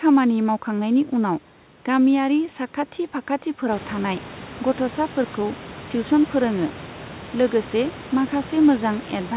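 Nothing in this speech recording sounds faulty.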